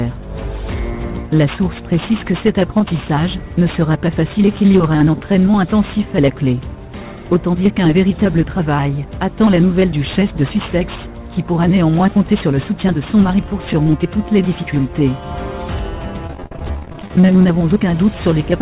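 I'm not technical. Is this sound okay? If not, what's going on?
No. Repeated packet loss (robotic sound) hits from 16.27 to 17.33 s. Dozens of tiny pieces of audio went missing in transit, none longer than 48 ms. The player covered each hole by stretching the sound just before it, so nearly half of that second is patched-over filler, which gives it a choppy quality.

A jitter buffer speed-up follows right after, from 17.36 to 17.89 s. Once the late audio caught up, the receiver had too much waiting and trimmed out tiny slivers, roughly a twentieth of a second in total. That stretch plays about 8% faster at the same pitch and sounds rushed.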